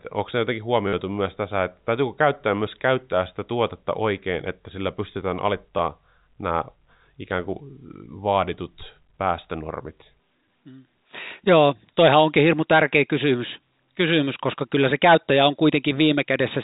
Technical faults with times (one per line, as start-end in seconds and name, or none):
0.88-0.93 packet loss with last packet repeated
5.78 packet loss with last packet repeated